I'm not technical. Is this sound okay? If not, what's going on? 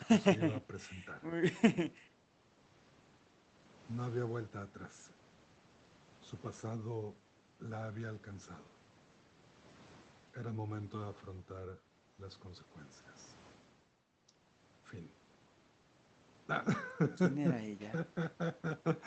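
Yes, no faults here.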